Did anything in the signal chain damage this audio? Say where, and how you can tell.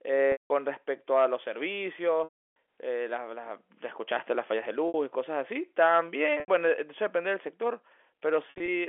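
Yes: packet loss with pitch repetition, at the network stage, at 0.32–0.50 s, 2.24–2.56 s, 4.88–4.94 s, 6.40–6.48 s and 8.50–8.68 s. The receiver loops the last pitch period and fades it over about 50 ms. The 60 and 80 ms gaps sound like a briefly held, buzzy tone. The 180 and 320 ms gaps decay to silence before cross-fading back. The final loss is scattered, with runs up to 60 ms, and the gap lengths fit 20 ms packets. The narrowband telephone coding is clean.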